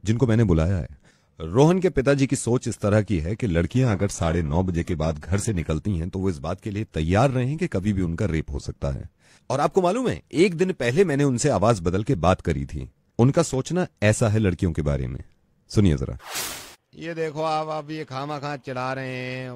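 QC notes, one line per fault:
3.71–5.71 s, adaptive stream at a lower bitrate: the top end suddenly disappears above 12.4 kHz and artefacts thicken for two seconds, then full quality snaps back with no gap. That fits the player dropping from roughly 96 kbit/s AAC to a 16 kbit/s HE-AAC rendition.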